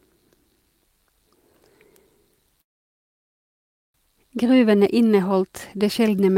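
At 2.61 s the speech stalls in a call audio freeze lasting until 3.96 s: about 1.3 s of near-silence. Packets were likely held up and the jitter buffer ran dry. When speech resumes, nothing's been lost, it just runs 1.33 s late.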